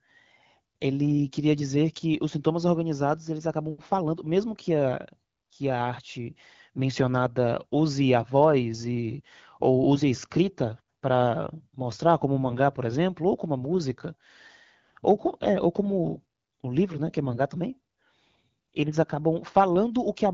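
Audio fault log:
Nothing to log here, just speech carried over the AMR wideband (HD Voice) codec at a rate that fits its 12.65 kbit/s mode, with no faults to note.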